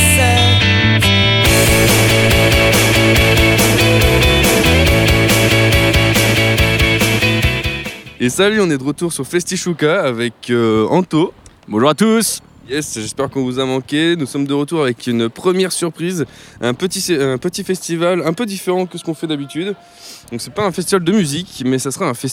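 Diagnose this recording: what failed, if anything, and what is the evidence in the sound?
Nothing failed here that I can hear: the audio runs along steadily at every stage of the chain, with no trouble I could point to at any moment.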